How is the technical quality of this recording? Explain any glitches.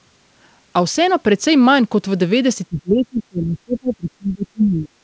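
The recording has one clear glitch: the speech is pushed down for about two seconds near the end. The band stops at 8 kHz, which fits a wideband call codec such as G.722.

From 2.68 s to 4.94 s, speech suppressed in double talk is the likely cause. With both sides talking at once, the echo canceller could not tell the local talker apart from loudspeaker echo, so it attenuated everything it heard. The voice sinks by up to around 30 dB.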